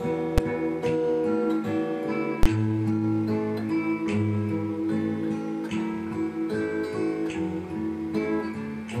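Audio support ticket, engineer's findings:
Invalid numbers at full scale: a DSP calculation producing infinite or invalid values, clamped to the maximum level, so output is pinned at full scale for one processing block. Heard as a single bang at 0.38 s (about 6 ms, fits a 256-sample block) and a second burst at 2.43 to 2.46 s (about 23 ms, fits a 1024-sample block).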